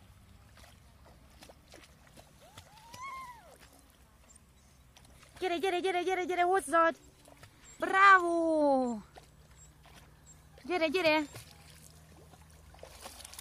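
Capture likely fell behind the hardware, causing a dropped buffer (overrun): at 4.37, 5.2 and 7.8 s the sound skips ahead roughly 0.3, 0.1 and 0.2 s.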